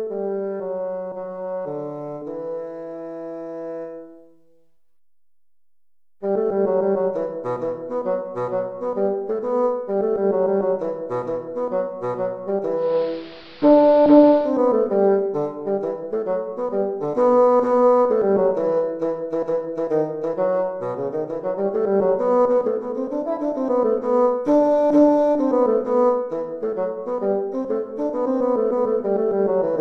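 At 12.75 s the digital radio blending to analogue begins: the receiver loses its digital stream and cross-fades over about 0.26 s to the station's AM broadcast, returning to digital at 14.57 s. On the spectrogram the upper treble vanishes for that stretch and a broadband hiss floor rises, roughly 25 dB under the programme. The waveform shows a level step of about 3 dB, and the sound turns dull and noisy.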